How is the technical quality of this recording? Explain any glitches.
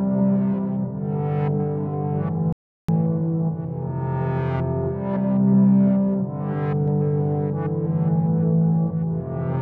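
There's one clear glitch: an audio dropout to silence from 2.53 s to 2.89 s, so roughly a third of a second just vanishes. The sound cuts off mid-flow and comes back abruptly, and the gap is silent with no room tone underneath. That points to the input going missing while the recorder kept writing silence, likely a brief disconnect, link failure or accidental mute. Whatever played in that stretch is lost.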